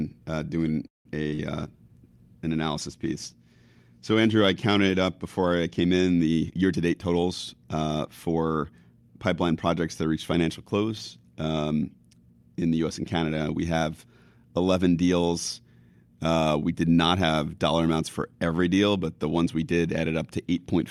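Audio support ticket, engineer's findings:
Call audio freeze, 0.87 to 1.07 s: sound stalls into roughly 160 ms of silence, then resumes where it stopped. Likely packets delayed and jitter buffer ran dry. Unlike loss, nothing missing; delay grows about 180 ms.

Short concealed packet loss, 1.29 to 1.33 s and 1.35 to 1.40 s: brief smears where about 20 ms each never arrived, filled by decoder concealment. Content is dropped, not postponed, which separates it from a freeze.

Call bitrate drop, 1.56 to 5.66 s: audio turns coarse and dulled as Opus falls from 64 to 28 kbps, bottoming out about 3 s. Bandwidth estimate fell. Steady degradation, no gaps, unlike packet loss.

Jitter buffer speed-up, 6.49 to 7.75 s: delivery runs at 115% with pitch unchanged, about a fifth of a second trimmed in pitch-period pieces. Excess buffered audio being drained. Constant pitch rules out a clock or resampling error.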